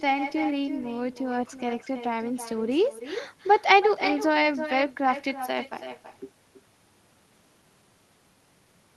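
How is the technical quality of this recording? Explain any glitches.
The recording has a clear echo problem that runs through the whole clip. Echo with no canceller is present from start to finish. The far end's loudspeaker feeds the speech back into its microphone, and nothing cancels it, so every phrase returns about a third of a second later, roughly 10 dB quieter and thinner. Room reverberation would blur and decay smoothly, but this is a distinct repeat, heard as a separate delayed copy.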